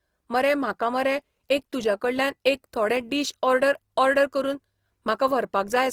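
Throughout the speech, the encoder appears to have run short of bits, likely from Opus compression in its music mode at around 24 kbps. It filled starved bands with folded or noise-like content, so the voice sounds rough and grainy, though content still reaches 20.4 kHz.

At 2.95 s, between "तुज्या कडल्यान एक थोडे" and "डीश ऑर्डर ऑर्डर करून", a nearby switch or discharge likely arced onto the audio line. It is an electrical switching spike, heard as a sharp snap lasting only a few milliseconds, sitting on top of the speech.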